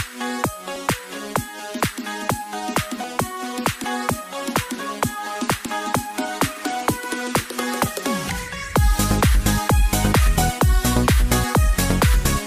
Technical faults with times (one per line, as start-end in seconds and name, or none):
0.76 dropped buffer (overrun)
3.04 dropped buffer (overrun)
3.84 dropped buffer (overrun)
5.66 dropped buffer (overrun)